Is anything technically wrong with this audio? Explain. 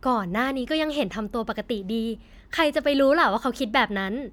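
No, nothing technically wrong can be heard here.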